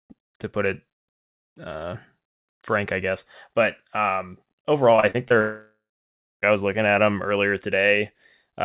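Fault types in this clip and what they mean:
Repeated packet loss (robotic sound): four short holes between 4.96 and 5.32 s, each patched by repeating the last sound, so that stretch turns choppy and robotic.
Long network dropout: from 5.40 s the sound smears into a fading buzz or hiss, then about 0.6 s of silence, returning at 6.44 s, likely a dropout losing about a second.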